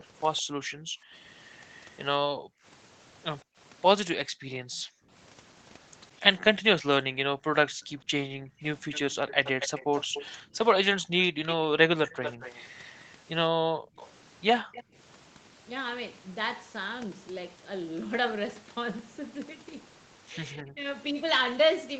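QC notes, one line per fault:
0.37–0.42 s, echo leak: A brief scrap of delayed speech trails the voice by 161 ms, about 30 dB down. The likely cause is the other end being on a loudspeaker, with its echo canceller letting a bit of residue slip back down the line.
8.92–14.83 s, echo leak: Same problem, but much worse. This time it's a delayed copy about 233 ms behind and only about 10 dB under the speech, a second, lagging layer of voice within this nearly six-second span.
0.53–14.86 s, speech suppressed in double talk: Across this stretch the voice keeps dipping and cutting out in pieces, adding up to roughly a second and a half, and the deepest drops are around 40 dB. This is likely the canceller getting confused when both sides talk at once, so it ducks the real talker along with the echo.
3.44–8.07 s, background gated by the echo canceller: The room tone drops out in short holes, going as deep as about 40 dB and totalling around 0.7 s. 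Each time the ambience comes back once the canceller releases, which is what happens when it clamps the mic hard while the loudspeaker is playing.
20.6–20.87 s, speech suppressed in double talk: There's a short dip near the end, about 0.3 s long and roughly 20 dB deep. It's milder than the earlier ones, but it's likely the same overlap-ducking behaviour.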